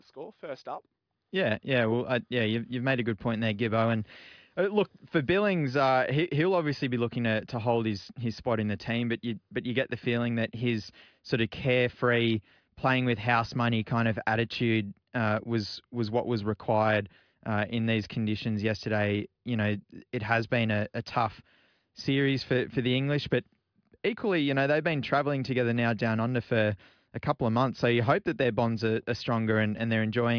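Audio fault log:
No fault is heard in this speech.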